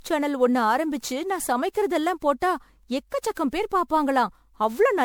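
Speech, and it's swirly, smeared and hollow the whole way through, with soft, blurred attacks and nothing above 20.8 kHz. That points to generation loss, likely from around ten MP3 re-encodes at a rate fitting 128 kbit/s, each pass adding fresh quantisation damage.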